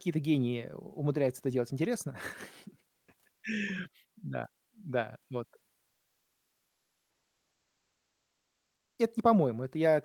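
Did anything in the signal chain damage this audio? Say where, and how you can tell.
Yes. Comfort noise in place of the background runs from 5.88 to 8.98 s, right after "да вот": for 3.1 s the real background becomes a flat, featureless hiss about 3 dB quieter. This is a codec-stage fault, likely Opus discontinuous transmission, with the receiver filling the pause with synthetic noise.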